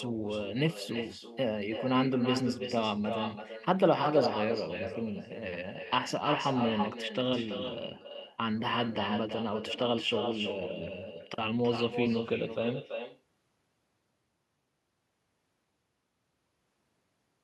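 From start to finish the speech carries echo with no canceller: every phrase returns roughly a third of a second later as a quieter copy, about 7 dB below the original, and thinner. The far end evidently played the call through a loudspeaker, its microphone picked it up, and nothing stripped it before sending it back. Unlike room reverberation, which smears continuously, this is a distinct, delayed repeat with a clear gap.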